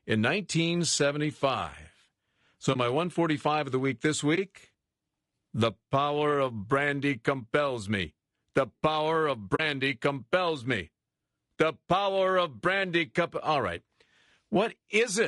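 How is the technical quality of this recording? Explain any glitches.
The recording has audible codec degradation throughout, plus four short dropouts.

Throughout, the speech sounds rough and grainy, with noise filling the gaps between harmonics and a thin, somewhat synthetic top band. This is likely low-delay AAC compression (AAC-ELD) at a low bitrate, around 32 kbps, where short frames resolve pitch harmonics poorly.

AAC frame loss with muting occurs at 2.73–2.76 s, 4.35–4.38 s, 9.55–9.60 s and 11.55–11.57 s. Each is a brief, soft-edged hole of about 20 ms, or about 40 ms at 9.55 s. The decoder zeroed the missing spectrum, and the overlapping windows fade the sound out and back in.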